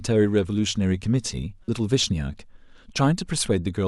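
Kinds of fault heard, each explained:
Damaged data in a compressed stream: a corrupted stretch of the encoded speech throws the decoder out of sync, so it misreads the affected frames and hunts for the next valid header. This produces a brief disturbance lasting about 36 ms, from 1.65 to 1.68 s.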